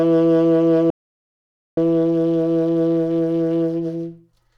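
At 0.90 s the music just drops out to dead silence, not even room tone, and comes back at 1.77 s, so about 0.87 s is simply gone. That's an audio dropout to silence, likely the input went missing while the recorder kept writing silence.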